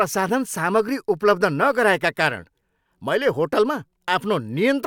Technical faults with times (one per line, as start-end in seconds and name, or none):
none